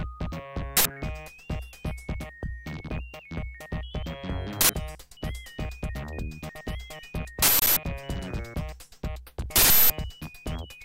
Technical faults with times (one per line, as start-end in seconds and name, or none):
0.77-0.85 uninitialised buffer
4.61-4.69 uninitialised buffer
7.42-7.77 uninitialised buffer
9.56-9.90 uninitialised buffer